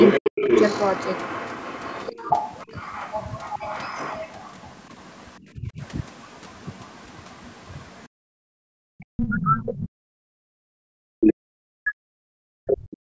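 From 0.0 to 4.53 s a second voice runs under the speech about 10 dB down, likely the other side's voice leaking through from the loudspeaker past the echo canceller. Within that stretch, from 0.2 to 0.48 s, the talker's speech drops away by as much as 40 dB, likely speech suppressed in double talk as the canceller turned both voices down together. What is likely the same kind of dip returns more gently at 5.56 to 5.82 s, around 15 dB. From 8.07 to 8.82 s the room sound falls away by about 40 dB and then comes back: the background was gated by the echo canceller, which clamped the microphone while the loudspeaker played. A faint scrap of the other voice, about 35 dB down, slips through at 9.01 to 9.05 s, likely leakage again. From 9.1 to 13.08 s the talker's speech is held down by up to about 40 dB for roughly 4 s, likely a long spell of double-talk suppression. Inside it, louder fragments of what is likely the far voice, only about 5 dB below the speech, break through at 11.2 to 11.32 s and 12.7 to 12.77 s. 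Nothing is heard above 8 kHz, consistent with call microphone processing.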